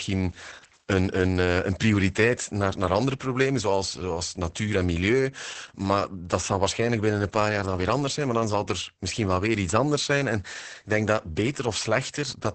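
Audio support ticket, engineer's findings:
Opus voice compression, throughout: nothing above 8.6 kHz, wideband SILK linear-prediction coding, coarse excitation giving heavy muffled, hoarse, robotic speech; points to roughly 10 kbps.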